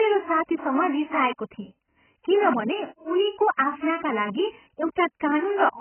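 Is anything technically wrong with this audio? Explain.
Yes. Throughout the speech the sound is dull and muffled, with nothing above about 3.1 kHz, and sibilants and sustained vowels carry a watery, warbling smear. This is likely AAC compression, with heavy damage that fits a very low bitrate of around 10 kbps. At that rate the encoder drops the upper band entirely and coarsely quantises what remains. Parts of the spectrum are left as gaps or filled with substitute noise, which produces the fizz and swirl.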